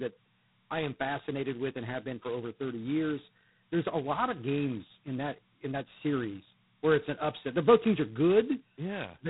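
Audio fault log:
Throughout: G.726 ADPCM. The speech carries a harsh, rasping hiss that tracks its level, which fits the 16 kbit/s mode. Nothing passes above 3.9 kHz.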